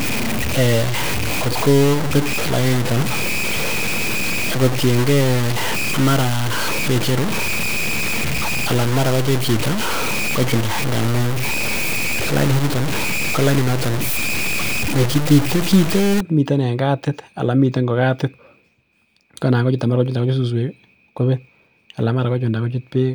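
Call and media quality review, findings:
Low bit depth without dither, 0.0–16.2 s: heavy grit following the speech, absent in pauses unlike hiss; likely truncation to around 4 bits.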